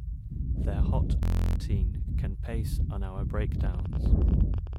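From 1.23 to 1.56 s the sound turns into a steady, rasping buzz at about 43 Hz, with no forward movement. This is a system hang loop. The computer or its audio driver stalled while the playback hardware kept replaying the same 23.22 ms ring buffer, about fourteen times over. That loop length fits a 1024-sample buffer. Roughly 300 ms of the real audio is missing, replaced by this one repeated slice.

From 3.61 to 4.77 s a train of clicks rides over the sound: about twenty sharp pops at an uneven pace, averaging 15.6 per second, each of similar shape and peaking at roughly the level of the sound itself. They tick through quieter moments too. An external pulse source is the likely cause, such as electrical interference from nearby equipment or a faulty connection or power supply.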